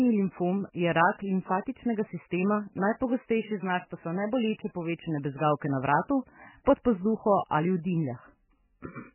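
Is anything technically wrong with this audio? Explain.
Yes. MP3 compression runs throughout: the speech has nothing above 3 kHz and heavy watery, swirling damage, likely from an MP3 encode at a very low bitrate, around 9 kbps. Starved of bits, the encoder dropped the treble and let weak frequency lines flicker frame to frame.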